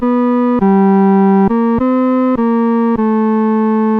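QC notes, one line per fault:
No faults found on this pass; nothing to log.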